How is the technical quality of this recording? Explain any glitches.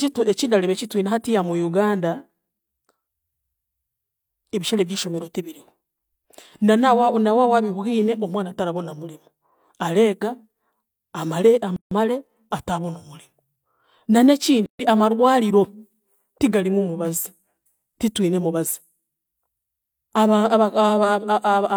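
The speech is interrupted twice by gaps at joins of encoded pieces. The audio was encoded in separate sections and spliced without trimming, so each encoder's start-up delay and final-frame padding remain as silence. The speech cuts out abruptly from 11.76 to 11.91 s (150 ms) and from 14.66 to 14.79 s (133 ms), with softened edges, then resumes exactly where it stopped.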